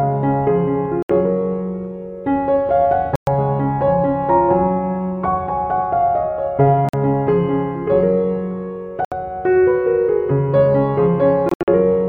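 Abrupt silent holes cut the sound at 1.03 s (70 ms), 3.16 s (116 ms), 6.89 s (46 ms) and 9.05 s (70 ms). From 11.49 to 11.68 s there is a stuttering cluster of gaps. Each time, the audio resumes further along, as though it had kept playing. This is likely a Bluetooth dropout, where packets missed the headphones' deadline and were discarded.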